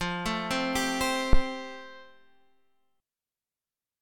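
At 1.33 s a phantom power thump hits: a deep, low-frequency thud peaking at about -9 dBFS and dying away by 1.44 s, with a decay of roughly 24 ms. It comes from a supply being switched on a live input, so the sudden voltage step passes through the coupling capacitors and reaches the signal path as a single large, slow pulse. The result is a dull knock under the sound rather than a click.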